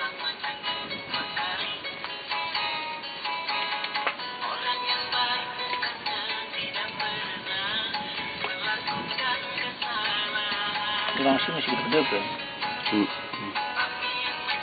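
No technical faults can be heard anywhere in this recording.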